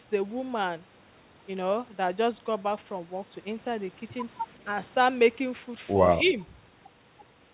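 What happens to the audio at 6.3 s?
From 6.18 to 6.37 s the speech dips by a few decibels for about 200 ms, likely speech suppressed in double talk: the echo canceller, hearing both sides at once, turned everything down. A waveform shows a brief shallow notch in the envelope, and a spectrogram shows faded energy below the 4 kHz band edge.

Between 6.25 and 6.31 s there is also a faint echo leak, likely from a loudspeaker whose canceller left residue. A copy of the speech returns 162 ms late, far below the main signal, and shows only as a weak repeated trace on a spectrogram.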